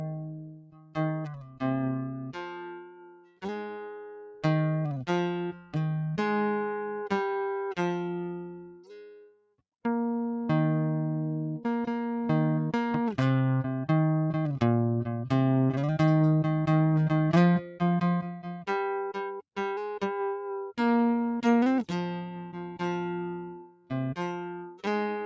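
Noise suppressor applied to music, running throughout this music clip: a speech-tuned suppressor treats sustained tones and ambience as noise, so the level keeps swinging by roughly 10 dB, with attacks passing while held notes and tails sink, giving a pumping, thinned sound. Sound cut by the noise suppressor is heard at 0.00–1.63 s, 1.98–3.46 s, 5.53–5.75 s, 8.44–9.61 s, 17.63–17.82 s, 18.22–18.69 s, 23.50–23.91 s and 24.37–24.86 s. In these stretches the suppressor clamps steady or decaying material hardest, dropping it by about 14 to 21 dB and cutting decays short.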